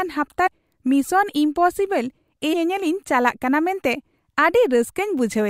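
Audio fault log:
0.46 to 0.48 s and 2.52 s, compressed frames skipped: The speech jumps forward twice, each time losing about a fifth of a second of sound. The skips are whole blocks of the coded stream that were missing or rejected as damaged. Each gap fits a run of frames about 26.1 ms long, roughly seven at the first point and ten at the second. Overlapping frames smear each join, so it sounds like a short blurred blip, not a sharp click.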